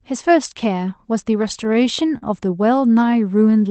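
Speech that stutters with repeated stalls between 1.31 and 2.24 s: nine short gaps, the longest 40 ms, where late packets emptied the jitter buffer and the receiver stretched the last sound. On a spectrogram these appear as brief smeared horizontal streaks, and in the waveform as repeated, fading segments. The band stops near 8 kHz, consistent with the Opus call codec.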